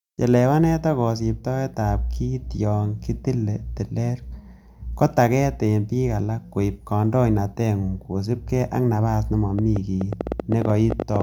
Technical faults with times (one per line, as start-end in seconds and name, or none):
9.59-11.22 train of clicks